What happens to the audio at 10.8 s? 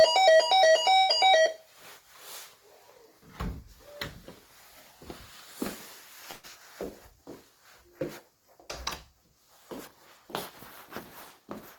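Nothing goes wrong at 10.8 s; the sound continues through that moment intact, with no dropout, click, distortion or other fault.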